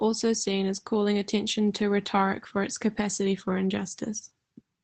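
A speech recording carried over an Opus call path around 24 kbps has two brief lost packets rebuilt from error correction, at 1.67–1.69 s and 3.77–3.79 s. Each 20 ms stretch is a coarser, noisier copy, not a silent gap or the smeared, repeated sound of plain loss concealment.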